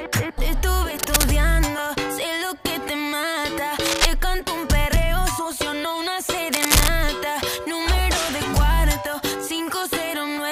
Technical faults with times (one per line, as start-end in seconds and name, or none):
0.99-1.25 cable scratch noise
3.85-4.05 cable scratch noise
6.52-6.91 cable scratch noise